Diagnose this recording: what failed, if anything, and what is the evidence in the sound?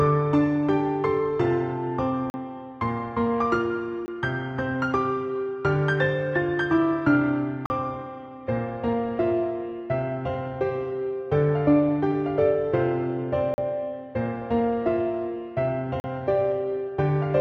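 Blocks of digital silence at 2.30, 4.06, 7.66, 13.54 and 16.00 s. Each gap lasts 40 ms, except 20 ms at 4.06 s. The sound cuts out and back with no fade. The buffer was likely left unfilled in time.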